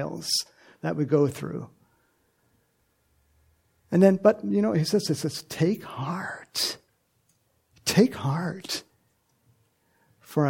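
No technical faults can be heard anywhere in this audio.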